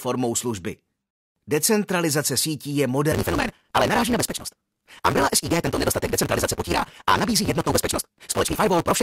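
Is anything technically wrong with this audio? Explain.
Yes. From 3.11 s, right after "sítí je", to the end there is a block size mismatch (truncated). Each block's tail is dropped, which fits a 256-sample read, so a 172 Hz buzz appears and the speech runs about 1.88 times fast. Unlike a simple speed-up, the timbre stays.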